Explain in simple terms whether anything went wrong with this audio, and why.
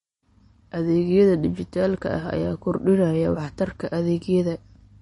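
MP3 compression damage runs through the whole clip. The speech sounds clearly watery, and nothing is left above about 10.6 kHz, so the crisp top end of s sounds is gone. This is likely the result of saving the file as a heavily squeezed MP3. To keep the file small, the encoder throws away the highest frequencies entirely and drops quieter detail that it judges unimportant. That detail flickers in and out from moment to moment, which gives the audible swirly quality.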